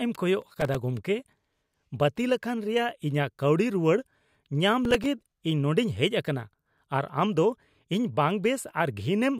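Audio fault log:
0.42–0.75 s, processor overload crackle: the processor fell behind and missed a long string of short audio deadlines, consistent with buffers of about 3 ms, each miss replaying a scrap of old audio with hard edges. Packed this closely, the repeats merge into a gritty crackling tear over the speech for about a third of a second.
4.85–5.06 s, processor overload crackle: a shorter overload spell causes the same tearing, this time with only a handful of misses.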